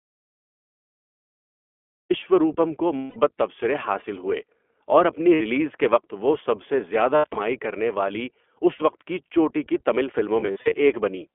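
Speech, carried through the iLBC codec for its whole length, with plainly audible coding damage: the sound is rough and slightly synthetic, and the band runs only from about 250 Hz to 3.4 kHz. On a spectrogram everything above 3.4 kHz is empty and the lowest region is thin. The texture fits the 20 ms frame mode, which points to roughly 15.2 kbps. Each frame's excitation is coded independently. Lost iLBC frames break through five times: 2.96 to 3.18 s (200 ms), 5.34 to 5.42 s (60 ms), 7.16 to 7.37 s, 8.74 to 8.82 s (60 ms), and 10.40 to 10.75 s. The third and fifth are scattered bursts, with losses of a few tens of milliseconds at most. In each gap the decoder repeats the last pitch cycle mixed with noise, so you hear a held, breathy vowel that fades on the longer losses. On a spectrogram the harmonics run flat and blurred. In the waveform the same cycle repeats at falling amplitude, and normal speech returns almost immediately afterward.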